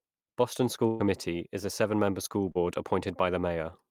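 From 0.87 to 1.03 s, just before "is a", a burst of packet loss removes about 120 ms of speech. The receiver extends the preceding sound for roughly 122 ms while fading it, then picks up later with that stretch gone.

At 2.52 to 2.58 s, a short concealed packet loss drops about 40 ms. The decoder bridges it with around 36 ms of synthesized continuation and crossfades back, heard as a brief smear where detail is momentarily lost.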